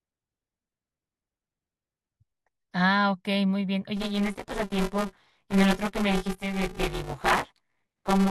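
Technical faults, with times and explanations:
3.97 to 8.30 s, buffer tearing: the program filling the playback ring buffer and the hardware draining it have slipped out of step and now cross inside every period. Roughly half of each buffer still holds audio from the previous lap, around 15 ms stale, butted against fresh audio with hard joins on both sides. Those joins repeat every 5 ms, so the speech takes on a robotic 200 Hz buzz that lasts to the end and sounds only while speech is present.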